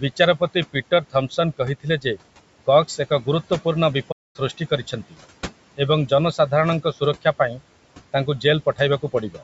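Throughout the clip there are noise suppressor artifacts. The suppressor estimates the steady background frame by frame and pulls those bands down by about 18 dB. The room noise, which sits about 19 dB under the speech, therefore drops away in the pauses and comes back beneath the talking.

Between 0.73 and 1.38 s comes the first instance of speech cut by the noise suppressor. The suppressor mistakes low-level parts of the speech for noise and attenuates them by up to about 17 dB, affecting roughly a tenth of a second in total. Those quiet sounds come across as swallowed. The same thing happens from 1.80 to 2.18 s, with a drop of up to about 18 dB and again about a tenth of a second affected, so soft consonants or endings go faint.

At 4.11 s there is a playback stall. The output falls silent for about 0.23 s and then continues, most likely because the player's buffer ran dry or its thread was briefly held up. 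It is heard as an abrupt hole in the middle of the flow, not as a fade.

The clip ends with one more speech cut by the noise suppressor, from 9.30 to 9.41 s. There the tail of the speech is pulled down by up to about 11 dB and sounds swallowed.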